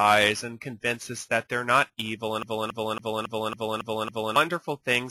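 A short stretch of audio hits a CD stuck on one turn from 2.43 s to 4.36 s. A scratch keeps throwing the laser back one track, so the same 0.28 s slice plays seven times, with a brief mute at each jump, giving a fast, even stutter. On a waveform the span shows seven identical envelope blocks side by side. A spectrogram shows one pattern tiled at a 0.28 s period, split by thin vertical gaps.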